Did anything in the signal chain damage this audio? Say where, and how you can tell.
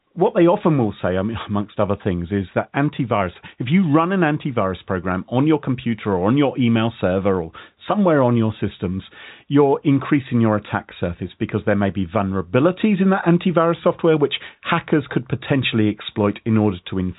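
Yes. At 7.01 s a single sharp snap sits on top of the speech, with the speech continuing underneath it and no gap. That points to the analogue wiring stage, most likely an electrical switching spike, where a nearby switch, motor or static discharge arcs briefly and the line picks up the burst. A digital dropout or buffer glitch would break the speech itself. This snap adds energy without removing any sound. The narrow G.711 telephone band doesn't account for it.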